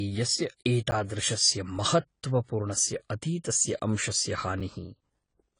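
From the start the speech sounds dull and smeared, with warbly, fizzy sibilants and nothing above 10 kHz. The likely cause is AAC compression at a low bitrate, around 24 kbps. A spectrogram would show a hard ceiling at 10 kHz and patchy, hole-ridden upper bands.

At 0.91 s and again at 4.6 s, a block of digital silence cuts in, about 10 ms and 5 ms long. Most likely the output buffer wasn't filled, so the signal drops out with no fade, heard as a brief tick. The waveform shows flat gaps, and the spectrogram shows thin vertical clicks.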